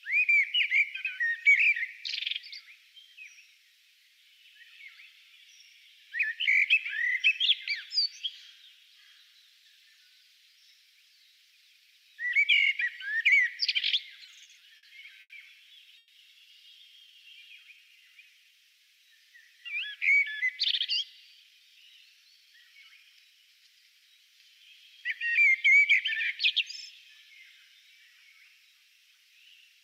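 From 14.25 to 14.85 s, packets kept arriving late, so the jitter buffer ran dry four times and the receiver bridged each gap by extending the last sound. These repeated stalls (stutter) filled about 110 ms in total, with the longest wait 50 ms. Nearly a fifth of that stretch is held-over sound, so the audio drags and catches.

At 15.21 to 15.32 s, a single packet missed its slot, producing a short stall from a late packet. The receiver held the preceding sound for 90 ms until the packet landed, then resumed where it left off. The result is one drawn-out moment with a slight buzz or dip, and everything after it sits 90 ms later.

From 15.98 to 16.12 s there is a call audio freeze. The sound stops moving forward and a continued buzz or hiss fills 120 ms without dropping to silence, then the audio picks up exactly where it paused. The likely cause is packets held up in transit, emptying the buffer again.

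Two jitter buffer slow-downs follow as the receiver rebuilds its reserve by repeating single pitch periods and slivers of pause. From 16.92 to 17.24 s it adds 39 ms, playing at 90% speed. From 17.64 to 18.56 s it adds 139 ms at 86%. The pitch stays unchanged while sounds stretch out.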